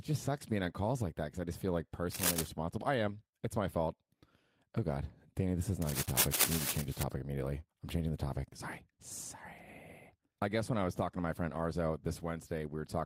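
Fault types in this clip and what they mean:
Cable scratch noise: dense, uneven bursts of scratching and rustling sit over the speech twice. The first runs from 2.11 to 2.48 s, after "I just feel like". The second runs from 5.82 to 7.03 s, after "this is" and ending before "immediately I'm changing the". Both bursts are roughly as loud as the speech. The likely cause is a worn cable or connector being moved, so that its contact resistance jumps around quickly and injects noise.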